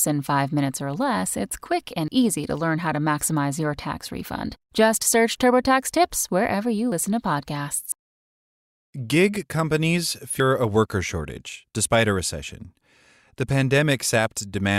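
At 2.08, 6.92, 7.92, 10.4 and 14.08 s the speech lurches forward, each time losing a slice of roughly 40 to 100 ms, the longest near 10.4 s. These are likely dropped buffers (overrun): samples were overwritten before being collected, so the sound on either side is spliced straight together. Unlike a dropout, no silent gap appears. The flow simply skips ahead.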